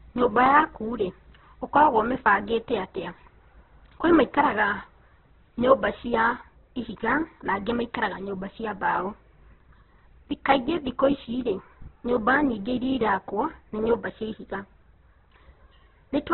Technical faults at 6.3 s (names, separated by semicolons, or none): Opus compression